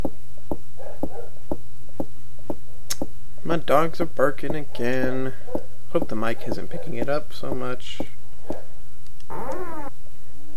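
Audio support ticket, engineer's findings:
No faults found on listening; the signal path shows no audible defect in level, timing, bandwidth or continuity, so there's nothing to attribute to any component.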